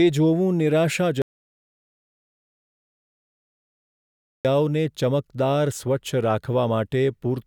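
An audio dropout to silence runs from 1.22 s to 4.45 s, cutting the speech off mid-flow for about 3.23 s. The gap is silent with no room tone, most likely because the input was lost while recording continued writing silence.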